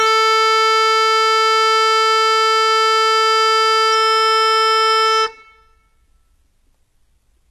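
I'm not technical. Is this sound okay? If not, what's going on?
No. The music has plainly audible damage throughout. The top end sounds bright but artificial, with gritty, metallic treble and nothing at all above 12.3 kHz. This is likely HE-AAC compression, which rebuilds the highest sounds from copies of lower ones.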